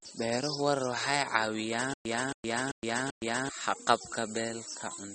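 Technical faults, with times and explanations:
Throughout: MP3 compression. The treble stops dead at about 8.4 kHz, and the audible swirly, watery texture points to a low bitrate near 34 kbps. Short of bits, the likely encoder dropped weak frequency lines frame by frame. A spectrogram shows a flat ceiling and flickering, patchy upper bands.
1.94 to 3.49 s: stutter with silent gaps. A 273 ms fragment plays four times, each followed by about 116 ms of silence, repeating every 389 ms. This is likely a stalled stream replaying its last buffer, so the intended audio is lost. The waveform shows identical blocks separated by flat gaps.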